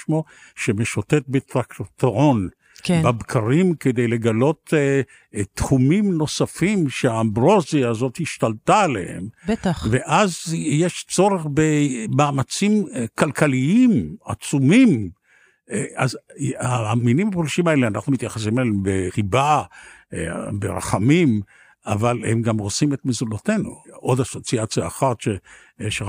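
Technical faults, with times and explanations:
Nothing technical stands out anywhere in this speech recording, so there's nothing to list here.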